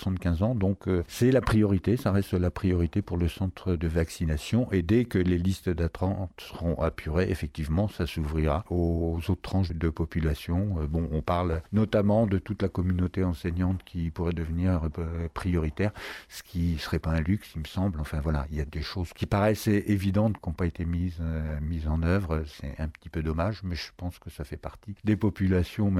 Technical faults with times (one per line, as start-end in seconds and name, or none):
none